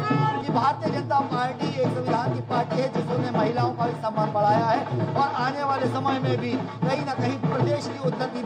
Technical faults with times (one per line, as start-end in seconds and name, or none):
0.00-8.46 imaging from linear upsampling